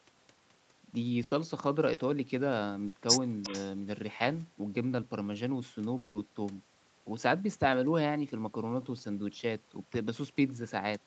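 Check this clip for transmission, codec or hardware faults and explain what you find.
The recording carries four kinds of transmission fault, all from the network and call path, with nothing pointing to a hardware fault. The band stops at 8 kHz throughout, which fits a wideband call codec.

Burst of packet loss, at 1.23 to 1.33 s and 2.87 to 2.95 s. Several consecutive packets failed to arrive, and the receiver stretched the last sound for about 80 ms and then 60 ms, fading it out, so each gap is a held buzz or hiss before the speech jumps ahead with that stretch missing. It is longer than the short concealed loss, but far shorter than the dropout.

Short concealed packet loss, at 1.93 to 1.99 s. Roughly 40 ms never reached the decoder in time, and the receiver synthesised a continuation from the preceding sound before blending back into real audio. The result is a brief smear or wobble rather than a held tone. 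Its shortness and quick recovery set it apart from the bursts, where the filler is long enough to hear as a sustained buzz that dies away.

Echo leak, at 3.42 to 3.62 s. A faint delayed copy of the speech appears about 356 ms behind the original, roughly 20 dB quieter. The likely cause is a far end playing the call on a loudspeaker, with its echo canceller leaving some of the microphone pickup unremoved. Unlike loss concealment, this adds a second, late copy of earlier speech instead of filling a gap.

Long network dropout, at 5.97 to 6.17 s. Audio stopped arriving for about 180 ms, likely from a network stall, and the receiver's continuation fades across the whole gap without reaching silence. The speech then resumes with that portion lost. It is heard as a longer decaying buzz or hiss than either burst, which is what separates it from the shorter packet-loss events.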